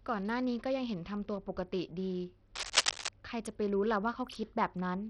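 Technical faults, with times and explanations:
Throughout, Bluetooth SBC compression: the speech sounds gritty and dull, with flickering treble. Likely a low bit pool, fitting about 64 kbps, starving the upper sub-bands.
2.55 to 3.09 s, cable scratch noise: dense, uneven scratching sits roughly level with the speech. A worn cable or connector was likely moved, changing contact resistance.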